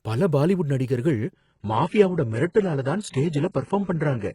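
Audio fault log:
1.33–4.35 s, adaptive stream at a lower bitrate: after "பல பாலிவுட் நடிகர்கள்" quality drops abruptly with no gap, treble synthetic, nothing above 11.1 kHz, pointing to a very low-bitrate HE-AAC variant.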